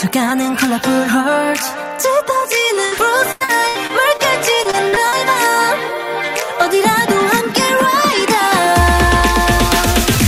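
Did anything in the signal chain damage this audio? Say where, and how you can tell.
Yes. A burst of packet loss at 2.85 to 2.93 s is a network fault. About 60 ms of audio is missing, bridged by the receiver extending the last sound and fading it, so a brief held buzz or hiss appears before the audio jumps ahead.

Repeated packet loss, heard as robotic sound, also comes from the network, at 3.31 to 4.21 s and again at 4.63 to 5.14 s. Each stretch has five gaps, the longest 89 ms and 39 ms. Concealment fills about a quarter of each span, producing choppy sound with pieces dropped.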